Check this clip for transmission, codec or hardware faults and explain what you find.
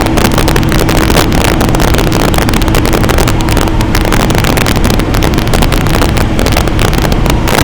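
Integer overflow runs throughout this recording of sounds. The signal is driven about 5 dB past the integer range, and instead of being limited at the ceiling, each sample that exceeds it wraps around to the opposite extreme. Around 3 percent of samples are affected, so only the loudest peaks flip across the full range. Those peaks come out as violent, sharp cracks, far harsher than the flattened distortion of ordinary clipping.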